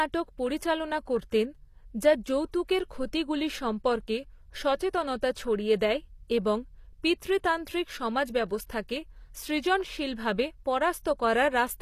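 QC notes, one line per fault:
Throughout, HE-AAC compression: the speech has likely been squeezed to a low bitrate, plausibly around 24 kbps, so only the lower band is properly coded and the treble is rebuilt from copied lower bands, leaving s sounds gritty and metallic, with nothing above about 14.9 kHz.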